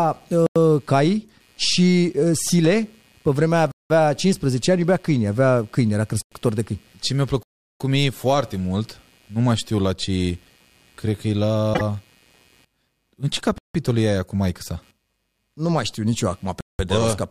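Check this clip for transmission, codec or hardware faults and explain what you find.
Three faults are present in this speech: computer activity noise throughout, six blocks of digital silence, and one short disturbance most probably from a broken MP3 bit reservoir.

Computer activity noise runs through the whole clip as a faint buzz pulsing roughly 150 times per second, around 40 dB below the speech. Load changes in the computer shift the audio circuit's shared ground, so the buzz follows machine activity rather than the speech.

Blocks of digital silence occur at 0.46–0.56 s, 3.72–3.90 s (just after "pe vremea"), 6.22–6.32 s, 7.43–7.80 s, 13.58–13.75 s (just before "e aia cu maică") and 16.61–16.79 s (just after "știu nici eu acum"). The output buffer was likely not filled in time and zeros went out instead. The lengths of about 93, 186 and 372 ms fit buffers of 4096, 8192 and 16384 samples. 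Each gap cuts hard to silence.

At 11.73–11.81 s the audio jumps ahead, and the disturbance lasts roughly three MP3 frame lengths. The likely cause is a broken MP3 bit reservoir: frames were lost, so the following frames borrowed data from the wrong bytes and decoded incorrectly.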